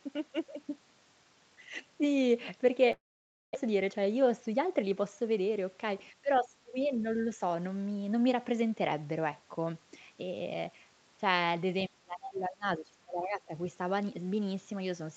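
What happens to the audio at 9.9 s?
Nothing goes wrong at 9.9 s: the speech carries on intact, with only the ordinary band limit of the call path, which leaves nothing above 8 kHz.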